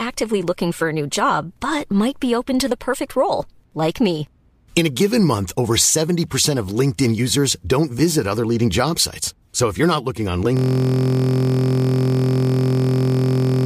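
At 10.57 s the speech locks into a system hang loop that lasts to the end. The system froze while the audio hardware kept replaying one 23.2 ms slice of its buffer, which fits a 1024-sample buffer. It repeats over a hundred times, giving a steady buzz at 43.1 Hz.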